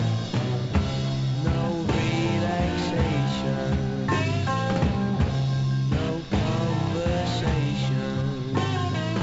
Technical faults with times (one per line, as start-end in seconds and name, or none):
none